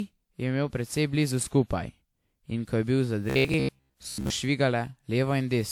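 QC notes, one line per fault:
Throughout: generation loss. The speech has a swirly, smeared, hollow quality that sounds worse than a single pass at around 128 kbit/s WMA would produce, and consonant attacks are blurred. This is likely the result of repeated lossy decoding and re-encoding, on the order of seven passes. Each pass re-quantises on a shifted frame grid, so quantisation noise and spectral holes accumulate. The band stops near 20.1 kHz.
3.30 to 4.30 s: robotic sound from repeated short buffers. For about a second, the speech turns into a rigid, metallic buzz at 66.8 Hz that still loosely tracks the syllables. The likely cause is playback receiving new audio too rarely and filling the gaps by looping the last short chunk, here about 15 ms, while the real audio is skipped. Roughly two thirds or more of the stretch is repeated material, and that fixed loop length imposes the buzz pitch.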